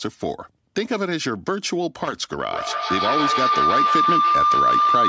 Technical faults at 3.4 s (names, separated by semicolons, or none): feedback howl